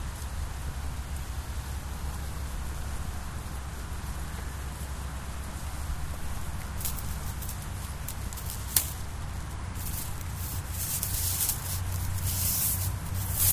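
No technical faults can be heard in this recording.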